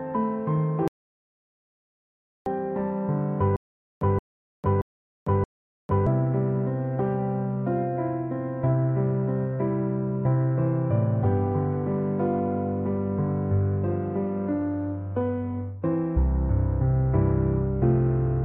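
At 0.88 s the audio drops out to silence until 2.46 s, about 1.58 s of flat silence with no room tone, likely from a lost input while recording continued. Unlike a fade or mute in the mix, the sound stops and resumes abruptly mid-flow.

From 3.56 s to 6.07 s comes a stutter with silent gaps. A 174 ms fragment plays four times, each followed by 452 ms of dead silence, repeating every 626 ms. The likely cause is a stalled player retrying. The silence between repeats distinguishes it from a seamless loop or echo.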